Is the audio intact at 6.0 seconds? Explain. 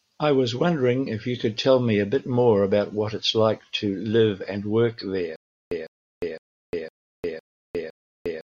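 No. At 6.0 seconds the speech is caught in a stutter with silent gaps that runs from 5.36 s to the end. A 153 ms burst repeats every 0.51 s with about 355 ms of digital silence between. This is likely a stalled stream replaying its last fragment, so the real audio is lost.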